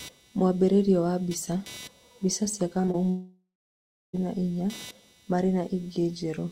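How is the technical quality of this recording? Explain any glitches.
The recording has three distinct faults: an electrical buzz, a cluster of brief packet-loss glitches, and a longer gap where the audio disappears.

Computer activity noise runs through the whole clip. The computer's changing load disturbs the audio circuit's shared ground, adding a buzzing pulse train at around 300 Hz, roughly 25 dB below the speech. On a spectrogram it shows as faint horizontal harmonic lines independent of the speech.

Short concealed packet loss occurs just after "mbica cia", at 2.81–2.85, 2.85–2.89 and 2.91–2.96 s. Each is about 20 ms of audio that arrived too late. The receiver extended the preceding sound to bridge it, giving a quick smear or wobble. The spectrogram shows smeared vertical slices.

A long network dropout runs from 3.10 to 4.15 s, before "na inya", likely caused by the connection stalling. 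About a second of speech never arrived. The last sound continues and fades, then leaves about 0.67 s of near silence: a flat waveform and an empty spectrogram band.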